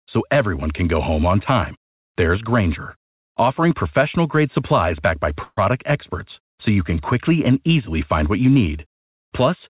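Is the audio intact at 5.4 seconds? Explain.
No. From 5.44 to 5.59 s there is a call audio freeze. The receiver ran out of audio, most likely because packets were held up in transit and the jitter buffer emptied. For about 130 ms it extends the last sound as a fading buzz or hiss, followed by roughly 30 ms of silence. When the packets arrive, playback resumes where it stopped. Nothing is lost, but everything after this point is about 130 ms later.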